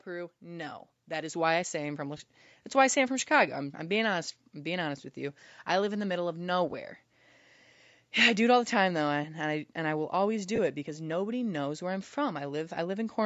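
From 0.05 to 2.34 s the level climbs steadily by about 8 dB, leading up to "why I say I'm". This is automatic gain rising: the gain control judged the input too quiet and raised its gain gradually over more than two seconds. Speech and background noise swell together, so the opening sounds as if it is being faded in rather than starting at a steady level.

Near the end of that rise, at 2.17 to 2.20 s, just before "why I say I'm", there is a brief dropout from lost LE Audio frames. About 22.5 ms of audio went missing, which fits three consecutive 7.5 ms frames from the likely LC3 link. The decoder filled the gap by repeating the last spectrum with randomised phase, so the speech briefly turns into a short noisy smear. The same fault recurs at 10.56 to 10.59 s, between "and I will always" and "it because nobody knows". The band stops at 8 kHz, as expected from call processing.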